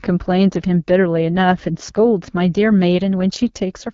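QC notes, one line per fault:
throughout, AMR wideband (HD Voice) codec: The speech has a rough, raspy edge and nothing above 7.5 kHz, which fits one of the lowest AMR-WB modes, around 8.85 kbit/s. At this rate the pulse-driven vocal tract model cannot follow the voice finely below 6.4 kHz, so the damage is plainly audible. The top band is filled with shaped noise rather than real detail. Unlike a plain low-pass cut, it adds grain as well as removing treble. The wider band rules out narrowband AMR.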